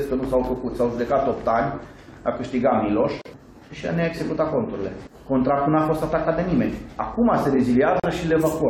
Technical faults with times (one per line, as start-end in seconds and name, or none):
3.22-3.25 gap at a join of encoded pieces
8.00-8.04 gap at a join of encoded pieces